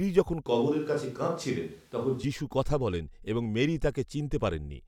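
Speech, where from 0.46 to 2.24 s the voice abruptly turns roomy and hollow with thinner bass at an unchanged level, then snaps back, likely a switch to a distant microphone. A spectrogram would show weaker low frequencies, smeared reverberant tails, and a faint noise floor roughly 35 dB below the speech, with hard edges at both boundaries.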